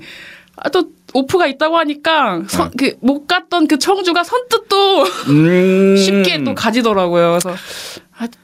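A speech clip with gain pumping running through its whole length, with a level swing of around 15 dB. Loud and quiet passages sit unnaturally close in level, giving a squashed, flattened dynamic. The likely cause is input gain set far too high, with a fast limiter or compressor clamping down on every peak.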